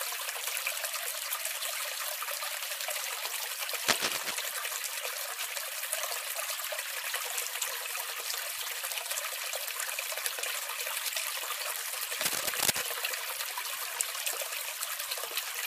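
A steady buzz at 46.9 Hz runs under the sound for its whole length. This is a block size mismatch (padded). One stage reads 1024-sample blocks, while the stage feeding it writes blocks that fall just short. The remainder of each block is filled with zeros, so a tiny silent gap repeats 46.9 times a second, which fits 1024-sample blocks at 48 kHz. The inserted gaps slow playback to 0.999 times normal speed, with timbre unchanged.

From 3.88 to 4.31 s, a dense, uneven rustling scratch sits over the sound, louder than the sound itself. It returns from 12.19 to 12.83 s at about the same level. This is cable scratch noise, likely from a worn cable, connector or control being moved. Its contact resistance flickers rapidly, which adds these ragged bursts of noise to the signal for as long as the movement lasts.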